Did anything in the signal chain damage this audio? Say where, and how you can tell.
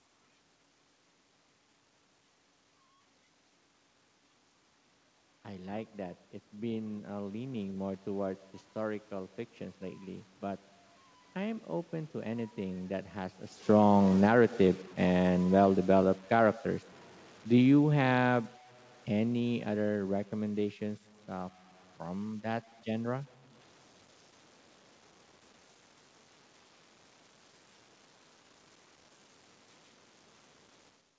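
Yes. At the sample-format conversion stage, the speech was likely cut to very few bits by plain truncation with no dither. Throughout the clip a grainy, buzzy distortion rides on the voice and changes with it, sitting only some 30 dB below the signal. That grain is strongest on quiet syllables, which fits an 8-bit truncation. Because the rounding error tracks the waveform instead of forming a steady hiss, it sounds like distortion rather than noise.

In call processing, automatic gain rising shows from 5.45 to 7.96 s. The level climbs by about 5 dB over roughly two and a half seconds, and the background room noise swells with the voice. A talker leaning in would change the voice alone. Because everything lifts together, the change comes from the gain control in the chain, which judged the input too quiet and turned itself up slowly.

The same gain control also shows automatic gain falling, twice. 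From 13.55 to 16.63 s the level sinks by about 8 dB, and from 17.52 to 20.66 s by about 5 dB. Each time the voice and the room noise drop together over several seconds. The first sag follows a move by the talker at about 13.5 s, but the slow, joint fall of voice and background comes from the controller pulling its gain down after judging the input too loud.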